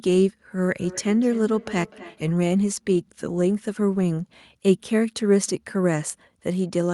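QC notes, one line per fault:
0.76–2.37 s, feedback echo between two devices: the speech comes back at a steady spacing of roughly a third of a second, peaking at about 17 dB below the direct speech. It sounds like a second device in the same room playing this call out loud while its own mic sends it back again. The echo canceller on each end only removes what that device plays itself, so the loop slips through.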